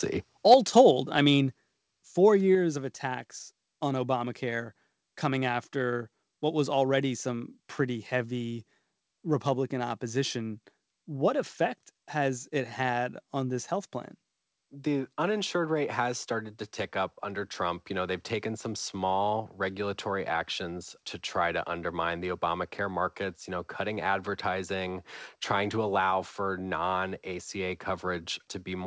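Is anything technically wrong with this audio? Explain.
Yes. Microphone overload appears from 0.51 to 0.81 s. The input was driven about 2 dB past the converter's limit, likely from a microphone gain set too high, so the tops of the loudest waveform peaks are cut flat. Around one to two percent of samples in that stretch are affected, giving a crackling, distorted edge.

Microphone volume stepped down twice, at 0.54 s and at 1.53 s, each time by about 4 dB. This is likely the call software reacting to the overloaded input by lowering the device's gain in discrete steps, so speech and background both drop abruptly in level. The first step lands inside the distorted stretch.

The call path itself carries the audio with nothing above 8 kHz, which fits G.722 at 64 kbps.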